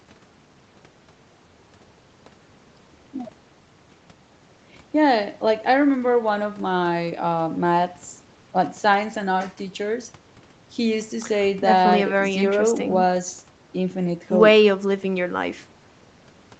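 No technical faults can be heard in this speech.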